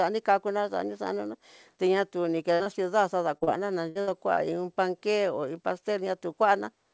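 At 2.54 s a burst of packet loss hits the call: about 60 ms of speech never arrives, and the receiver extends the last sound to cover the hole before jumping ahead, so you hear a held, dimming buzz or hiss and then a skip. Immediately after, from 2.63 to 2.69 s, a short concealed packet loss follows. Another 30 ms is missing and patched from the preceding sound, leaving a brief smear as the real signal blends back in.

Two more short concealed losses run back to back at 3.38 to 3.44 s and 3.44 to 3.50 s. Each drops 30 ms, and the decoder fills each one by continuing the previous pitch or noise. The result is a wobbly, slightly blurred stretch where a quick consonant can disappear.

Bursts return at 3.89 to 3.98 s and 4.01 to 4.10 s. Each loses about 60 ms, giving two stuttering buzz-and-skip gaps only a few hundredths of a second apart. A final short concealed loss at 4.34 to 4.40 s adds one more brief smear.

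The G.722 call path, running at 64 kbps, removes everything above 8 kHz.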